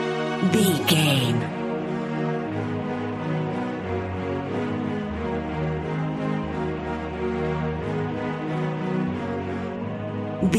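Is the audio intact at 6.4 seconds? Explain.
Yes, at 6.4 seconds the audio is intact, with no dropout, click, distortion or other fault to be heard at that moment.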